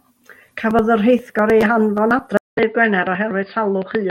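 At 2.37 s the speech drops out for about 200 ms, then returns duller and boxier, with nothing above 4.9 kHz, a few decibels quieter and over a faint new noise floor. The likely cause is an input switched to a poorer device, whose narrower band persists to the end.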